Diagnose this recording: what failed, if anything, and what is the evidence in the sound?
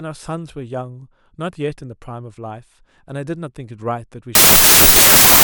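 A sample-format conversion failure, wrong sample width, starts at 4.35 s and runs to the end. Packed 24-bit data read as 16-bit gives loud noise burying the speech, slowed to about two-thirds speed and lower pitch.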